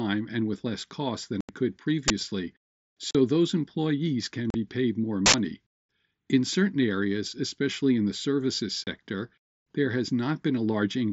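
A speech recording carried over a wideband mSBC headset link, with the 8 kHz bandwidth limit that implies, is broken by abrupt silent holes. The first follows "with less cost than" at 1.41 s and lasts about 82 ms. Shorter ones of about 38 ms fall at 3.11 s, just before "those employees can be", and at 4.50 s. One of 30 ms comes after "especially in the services" at 8.84 s. These gaps are unconcealed Bluetooth headset packet loss: voice frames between headset and phone went missing and silence replaced them. The gap lengths fit runs of roughly 7.5 ms frames. Separately, a loud crack hits at 2.08 s (20 ms) and a short, loud burst of harsh digital noise from 5.26 to 5.34 s (80 ms). Each is an uninitialised buffer, played out before any audio was written into it, so leftover memory contents were heard as samples.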